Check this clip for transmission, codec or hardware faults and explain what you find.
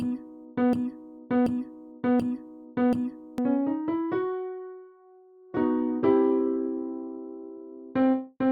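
Two faults are audible: a repeating loop at the start and a sudden drop in stream quality in the second half.

From the very beginning to 3.38 s there is a broken-record loop. It is already running when the clip opens, cycling a 0.73 s fragment of audio four times, back to back and identical each pass. This is most likely a player, encoder or stream stall that kept resending the last fragment it had buffered. Whatever audio belonged in that span is missing.

From 5.42 s to the end, the sound switches abruptly to an adaptive stream at a lower bitrate, with no gap at the transition. Codec artefacts become more prominent. The character of the degradation fits an Opus stream stepping down from 64 to 32 kbit/s, as adaptive streaming does when the connection slows and the player selects a cheaper rendition to keep playback continuous.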